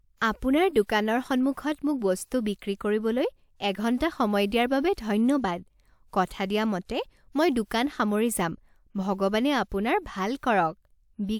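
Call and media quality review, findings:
No faults found in this speech recording. Nothing to attribute to any component in the chain.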